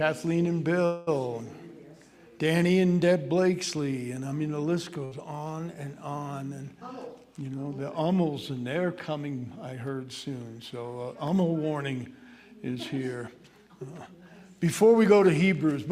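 From 0.85 to 1.09 s the last sound is stretched into a fading buzz or hiss for about 216 ms, then continues from where it stopped with nothing lost. This is likely a call audio freeze: delayed packets drained the jitter buffer, adding about 216 ms of delay.

At 5.05 to 5.13 s a burst of packet loss occurs. The receiver holds the preceding sound for about 63 ms while turning it down, then resumes roughly 60 ms further on, so that stretch of audio is simply absent.

Jitter buffer speed-up follows at 6.81 to 7.82 s, playing at 110% speed, and again at 13.15 to 14.22 s at 111%. The buffer had built up excess delay, so short pitch-period segments were cut repeatedly, about a tenth of a second the first time and about 0.15 s the second. Pitch stays the same while the sound runs noticeably hurried.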